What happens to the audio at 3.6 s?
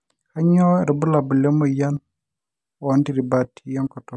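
At 3.6 s the speech carries on without any audible fault.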